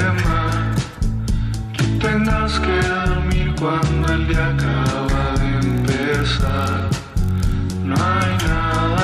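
From 5.61 to 7.54 s a low buzz at about 43.1 Hz runs under the sound, with pitch and pace essentially unchanged. This is a block size mismatch (padded): each block, which fits a 1024-sample read, is topped up with zeros, leaving a brief gap every cycle.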